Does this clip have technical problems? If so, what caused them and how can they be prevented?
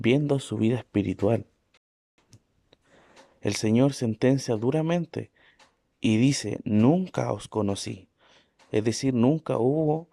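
Yes. A rebuffering stall occurs from 1.77 to 2.18 s. The speech cuts to silence for about 406 ms, then resumes exactly where it stopped. The player exhausted its downloaded audio and waited for more. Larger buffers or adaptive bitrate switching prevent this.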